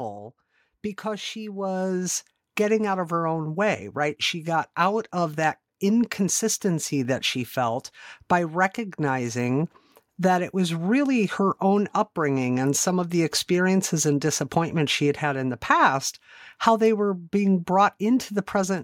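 From 1.02 s to 4.27 s the level climbs steadily by about 8 dB as automatic gain rising sets in. The gain control judged the input too quiet and raised its amplification step by step, so speech and background noise swell together rather than the speech alone getting louder. On a waveform the envelope widens over those three seconds; on a spectrogram the noise floor brightens along with the speech, settling just before "got out of that".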